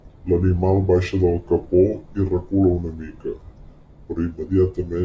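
The whole clip plays slow and low, 0.73 times speed and 5.55 semitones down. That's a wrong sample rate, fitting 22 kHz speech played at 16 kHz.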